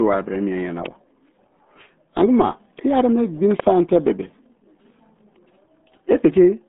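Throughout, the speech has passed through the RealAudio 14.4 codec at a rate fitting 8 kbit/s: it is band-limited to about 150 Hz–3.6 kHz, heavily muffled and gargly.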